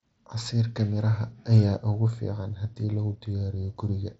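No faults here; the speech arrives over a Bluetooth mSBC headset link with nothing above about 7.7 kHz, which is that wideband path working as designed.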